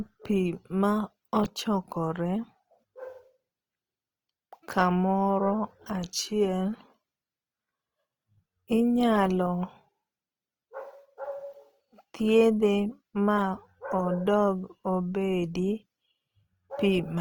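Opus compression runs through the whole speech clip. The cause is likely its music mode at a low rate, which fits about 24 kbps. Starved bands get filled with noise or copied lower bands. The speech turns rough, grainy and noisy.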